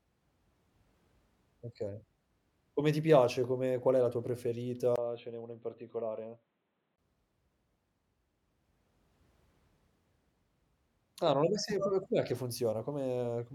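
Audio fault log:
4.96 to 6.98 s, input switched to a poorer device: the speech goes dull and boxy after a 20 ms gap at 4.96 s. It also drops by roughly 5 dB and picks up new background noise around 45 dB below the speech. The recording likely moved to a narrower-band microphone or a headset's call profile, whose own response and noise floor replace the original input until the brighter sound returns at 6.98 s.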